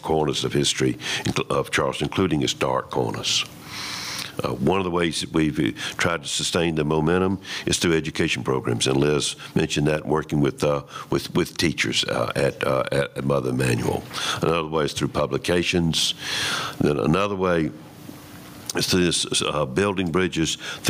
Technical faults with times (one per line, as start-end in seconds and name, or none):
0.00-20.89 gain pumping